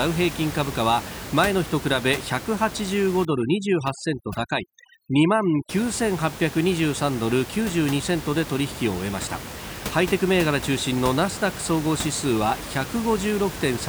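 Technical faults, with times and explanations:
3.25 to 5.69 s, overdone noise removal: a noise reduction stage is working far too aggressively against the room noise, which otherwise sits about 12 dB below the speech. It pulls individual frequency bands down or out whenever their level comes close to its noise estimate, so the background collapses into near silence dotted with twinkling specks, and the quieter parts of the speech are cut away too.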